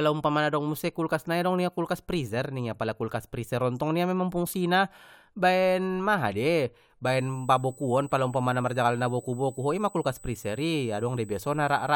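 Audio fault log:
7.05–11.96 s, USB whine: a fixed-pitch 8 kHz tone runs to the end, about 25 dB below the speech, as current drawn in 125-microsecond bus microframes leaks through power or ground. A spectrogram shows a thin horizontal line at 8 kHz.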